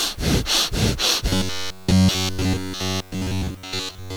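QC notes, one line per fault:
1.29–4.17 s, robotic sound from repeated short buffers. The sound collapses into a rigid, metallic buzz at about 94 Hz that loosely tracks the original. The likely cause is starved playback looping a roughly 10.7 ms buffer, so nearly everything heard is repetition.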